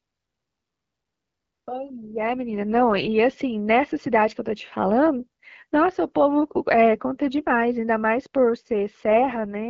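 At 2.02 s the speech turns rough and buzzy, and it stays that way until 3.12 s. It goes rough again from 9.10 s to the end at 9.69 s. These are AMR rate drops. The network pushes the HD Voice coder down to a lower rate to buy error protection, and the raspy, synthetic texture fits a step from 12.65 to 6.6 kbit/s. The bandwidth holds and nothing drops out.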